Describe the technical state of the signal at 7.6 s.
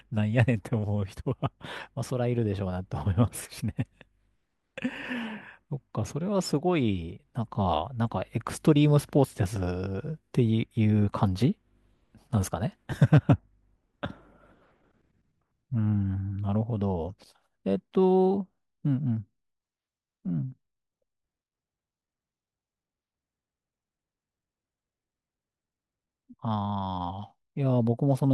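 At 7.6 s the signal is intact, with no audible fault at that moment.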